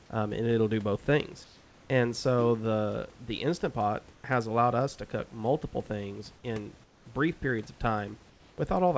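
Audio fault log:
1.44–1.90 s, 6.84–7.06 s, 8.30–8.58 s: comfort noise in place of the background. For 460, 220 and 280 ms the room's textured hiss, about 30 dB below the loudest sound, gives way to a flat, featureless noise, about 2, 5 and 3 dB quieter, then returns when the sound resumes. The likely cause is discontinuous transmission with synthetic fill during pauses. Unlike a noise gate, the gap is never silent, and the fill stays within the call's 8 kHz band.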